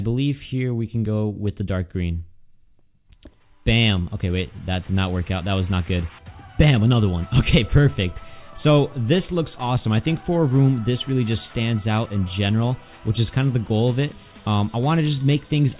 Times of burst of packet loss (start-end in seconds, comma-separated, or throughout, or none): none